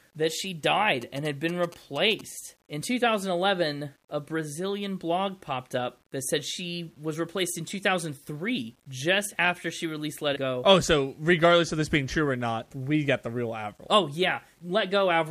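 Speech runs through a grainy, signal-following roughness for its whole length. Quiet passages turn gritty, with error at around 40 dB below the speech, likely from low bit depth without dither, around 10 bits with plain rounding. Unlike steady hiss, this grit rises and falls with the sound itself. From 1.02 to 2.21 s, just after "that she", GSM signalling bursts break in as a galloping dit-dit-dit of short 217 Hz buzzes at about 20 dB below the speech. The 217 Hz rate and the stuttering grouped pattern set these apart from steady 50 or 60 Hz mains hum.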